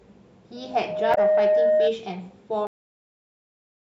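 At 0.56 s a loudspeaker feedback squeal starts up. The microphone is hearing the loudspeaker it drives, and at about 619 Hz the loop gain tips past one, so that single tone feeds on itself. It swells over well under a second until it sits roughly 10 dB above the speech, a steady howl that dominates until it lets go at 1.96 s. By then the loop has been broken or the gain has fallen back.

Right in the middle of that howl, from 1.11 to 1.18 s, there's a brief squawky blip: damaged data in a compressed stream. A short run of the encoded bytes is corrupt, so the decoder misreads those frames, loses its place, and hunts for the next valid frame header. You hear a garbled chirp of about 70 ms, layered over the feedback tone.

Then at 2.67 s the clip has a cut-off end. The speech stops mid-sound and drops straight to digital silence with no natural decay. The final buffers were never written out, so nothing after that point survives, and the last second or so of the file is just dead air.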